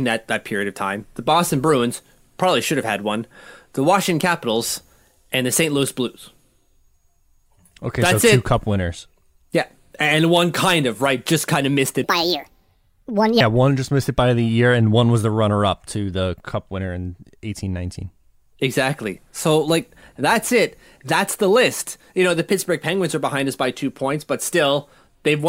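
Speech, with a section at the wrong speed from 12.04 to 13.41 s. The audio runs 1.5 times fast, so the voice jumps up about seven semitones and hurries together. A pitch-shift alone wouldn't change the pace. This is likely a clock mismatch during playback or editing.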